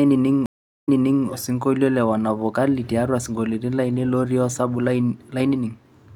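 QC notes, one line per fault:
0.46–1.27 s, stream reconnect: the speech drops into about 0.39 s of total silence as the connection breaks. Playback then resumes roughly 0.42 s earlier than where it stopped, so a short stretch of speech is heard twice, because the server resent a burst after the fresh decoder started mid-stream. The restart fades in over its first frame or so. On a waveform this is a flat gap followed by a soft ramp-up. A spectrogram shows a blank vertical band, then repeated patterns.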